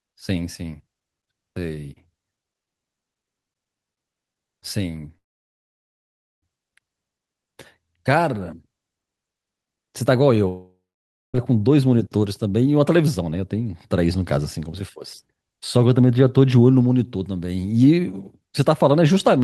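A call audio freeze at 5.17 to 6.44 s interrupts this speech clip: a brief fading fill turns to silence for about 1.2 s, likely packets stalling and emptying the jitter buffer, then speech resumes intact but later. A long network dropout at 10.48 to 11.36 s follows a short fade with about 0.56 s of silence, and speech returns with roughly 0.86 s likely lost in transit.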